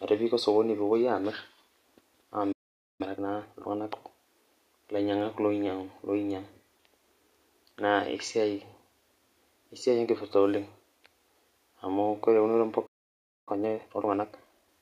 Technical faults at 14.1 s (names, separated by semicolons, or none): time-compressed catch-up